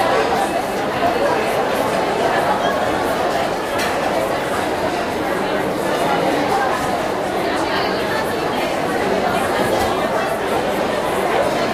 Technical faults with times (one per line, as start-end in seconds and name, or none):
none